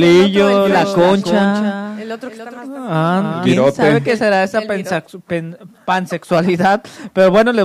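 From 0.62 s to 3.46 s a doubled audio track appears: a full-band copy trails by roughly 300 ms, about 10 dB quieter, with no decay, likely from a second capture path. It starts and stops abruptly, and the waveform and spectrogram show each onset repeated.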